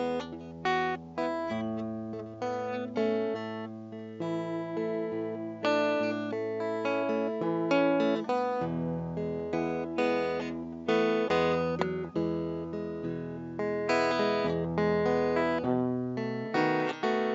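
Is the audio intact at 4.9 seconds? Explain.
Yes, at 4.9 seconds the music plays through intact, with no dropout, click, distortion or other fault at that moment.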